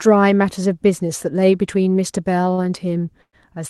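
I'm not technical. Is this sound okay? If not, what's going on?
No. At about 2.53 to 2.60 s, one sound in the speech is held a bit too long, with a slight buzz or dip. This is a short stall from a late packet: a piece of the call arrived late, so the receiver stretched the last sound for about 44 ms, then carried on with nothing lost.

From about 3.22 to 3.35 s the speech stops, with a brief fading buzz or hiss and then roughly 80 ms of silence, before it resumes exactly where it left off. This is a call audio freeze, likely caused by data held up on the way, which put a pause of about 0.11 s into the speech without cutting anything out.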